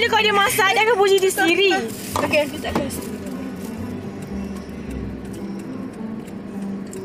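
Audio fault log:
Nothing to log here: I listened all the way through and didn't hear anything go wrong at any point.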